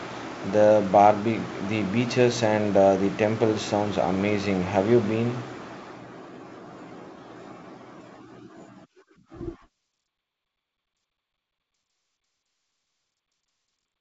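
Nothing stood out on listening to this speech clip, which comes through the G.722 wideband telephone coding at 48 kbit/s with nothing above about 7.7 kHz.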